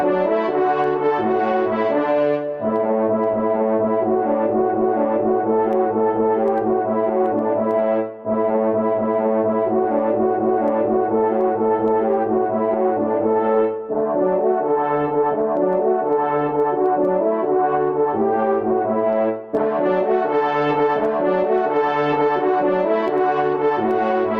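Gain pumping runs through the whole recording. The level ducks by around 10 dB under each loud sound, leaving the dynamics squashed and flat. The likely cause is input gain set far too high, with a fast limiter clamping each peak.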